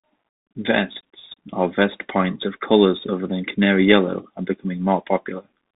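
Throughout, Bluetooth CVSD headset codec coding leaves a hard spectrogram ceiling at 3.8 kHz, scratchy s sounds and a granular hiss from its one-bit steps.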